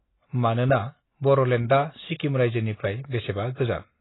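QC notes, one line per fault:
throughout: AAC compression. The speech was likely squeezed through a heavily starved AAC-LC encoder, at a rate that points to something around 16 kbps. With so few bits per frame, the encoder discards everything above 3.9 kHz and coarsely quantises what remains, so the voice comes across dull and boxed-in, with sibilants robbed of their edge and a smeared, warbling texture clinging to sustained sounds for the full clip.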